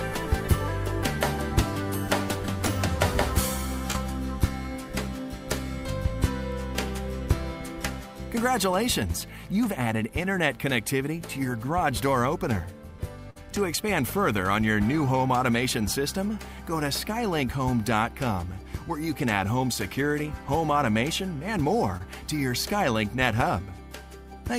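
A brief smear at 3.91 to 3.96 s and again at 21.97 to 22.02 s is short concealed packet loss: about 20 ms of audio failed to arrive in time and was patched by extending the preceding sound. At 13.30 to 13.37 s, a held, fading tail followed by a jump forward marks a burst of packet loss, where about 60 ms went missing and roughly 50 ms of continued sound covered it.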